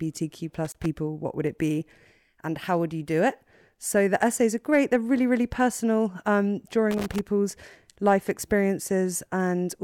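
Loose connector crackle hits at 0.65 to 0.86 s, before "what would it be", and 6.91 to 7.21 s, after "really really personal um". A dirty contact chops the signal into scratchy bursts.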